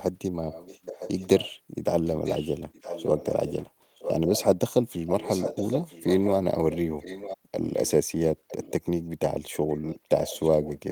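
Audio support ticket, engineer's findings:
Echo leak, likely a far-end speakerphone echo canceller passing residual pickup back. Delayed speech copy about 0.96 s late, 10 to 20 dB under the voice, at 0.5–1.53, 2.04–4.44, 5.06–6.31, 6.71–7.91, 8.48–8.9 and 9.51–10.91 s.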